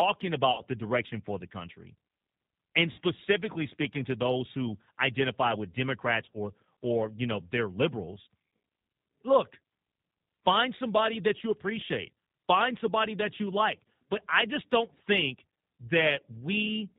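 Throughout the speech, the G.729 codec damage is plainly audible. Nothing reaches above 4 kHz, and the voice has a slightly rough, synthetic texture. That texture comes from rebuilding each 10 ms frame from a vocal tract filter, a pitch predictor and a few pulses, which fits an 8 kbit/s codec. A plain narrowband filter would dull the top end but leave the voice smooth. The grainy, modelled quality is what marks a low-rate codec.

VoIP packet loss concealed by the speech codec occurs three times. The first runs from 0.52 to 0.64 s, just before "the direction for the", and the second from 2.92 to 3.00 s. Each sounds like about 60 ms of lost audio, consistent with three consecutive 20 ms packets. The decoder stretches the last sound into a fading, extrapolated fill. The third, at 14.94 to 14.97 s right after "I just don't", is a shorter smear of about 20 ms, consistent with a single lost packet. 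A raw dropout would be a hard silence or click. Here the gap is filled with decaying, extrapolated sound, and the speech stays weak briefly after it returns.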